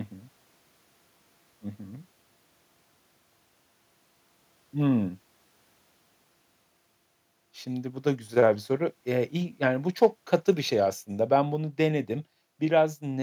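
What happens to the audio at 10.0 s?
Right after "yani bu", from 10.03 to 10.06 s, a brief harsh crackle marks microphone overload, likely from input gain set about 2 dB too high. The waveform shows flattened peaks on a few percent of samples, and the spectrogram shows a broadband smear.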